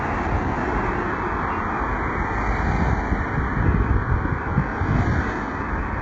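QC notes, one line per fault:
throughout: HE-AAC compression, likely near 8 kbps; treble copied from lower bands sounds gritty and metallic; spectrogram shows heavy repeated patches, blank above 8 kHz.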